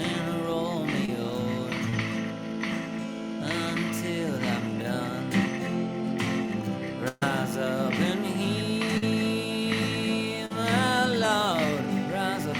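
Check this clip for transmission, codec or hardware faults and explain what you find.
The audio shows transmission faults from lost packets on the network path.

Short concealed packet loss appears four times: 1.05 to 1.10 s, 1.90 to 1.94 s, 8.97 to 9.04 s and 10.46 to 10.52 s. Each hole of 20 to 40 ms was bridged by extending the preceding sound, so it registers as a brief smear or wobble with no audible gap.

A burst of packet loss at 7.08 to 7.23 s takes out 140 ms. The receiver prolongs the last sound as a fading buzz or hiss, ending in about 20 ms of silence. The audio then picks up later, with the material in between gone, which sets it apart from the shorter fills.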